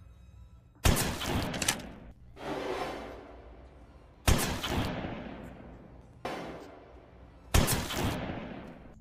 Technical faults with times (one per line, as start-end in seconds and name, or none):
2.16 overlap between stream segments
4.14 overlap between stream segments
6.13 overlap between stream segments
8.12 overlap between stream segments